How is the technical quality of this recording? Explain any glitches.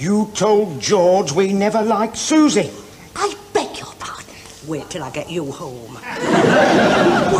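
Nothing here needs explaining: no glitches turn up anywhere in the recording, so there's nothing to flag.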